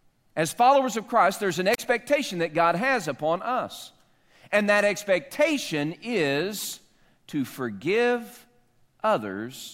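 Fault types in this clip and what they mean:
Wireless microphone squelch dropout: right after "there's an", at 1.72 s, a quick burst of hiss gives way to a hole of near silence lasting about 32 ms before the speech returns at 1.78 s. The analogue FM radio signal faded far enough that the receiver's squelch muted its output.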